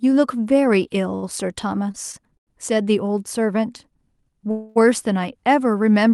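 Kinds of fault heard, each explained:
Short stall from a late packet: four times the jitter buffer ran empty, holding the last sound for 15 to 95 ms before resuming with nothing lost.
Call audio freeze: at 4.51 s the sound stretches into a fading buzz for 0.25 s, then continues intact, likely because delayed packets emptied the jitter buffer.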